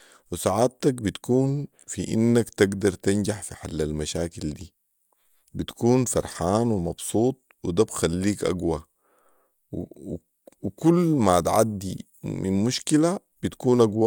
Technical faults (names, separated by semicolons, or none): none